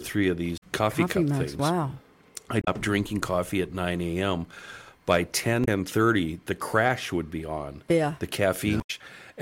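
Damaged data in a compressed stream means some frames arrive corrupted, so the decoder misreads them, loses sync and hunts for the next header. The result is brief glitches at 0.56–0.63 s before "coffee coffee cup things", at 2.60–2.68 s before "drinking coffee at", at 5.61–5.68 s and at 8.77–8.90 s.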